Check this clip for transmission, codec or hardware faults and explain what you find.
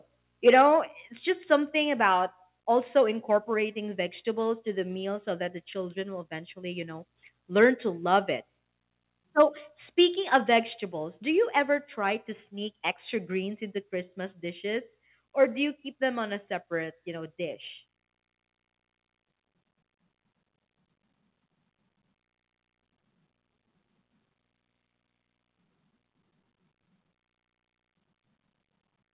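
Two hardware-side faults can be heard in this speech clip: short bursts of harsh distortion on loud peaks and several sudden drops in level. The narrow sound, with nothing above 4 kHz, fits a G.711 mu-law call path at 64 kbps.

Microphone overload, at 0.47–0.62 s, 7.62–7.65 s (between "will eventually you know" and "to love it"), 9.39–9.42 s and 10.34–10.36 s: the loudest moments turn crackly and gritty. The likely cause is input gain set so high that peaks ran about 1 to 4 dB past the converter's ceiling and had their tops flattened, a few percent of samples at a time.

Microphone volume stepped down, at 0.49 s, 1.5 s (between "it's just" and "about also"), 3.54 s (between "about also" and "vegetables to the meal") and 10.8 s: voice and background drop abruptly together, by about 2, 3, 1 and 2 dB. This is likely the call software cutting the device's input volume in single steps, reacting to the overloaded peaks.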